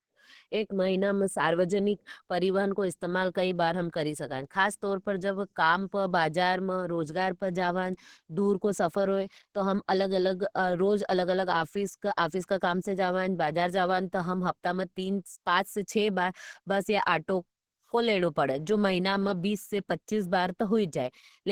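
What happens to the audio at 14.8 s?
At 14.8 s, as throughout, the speech has the coarse artefacts of very low-bitrate coding even though the spectrum reaches about 20.2 kHz, likely low-bitrate audio saved at a high bitrate.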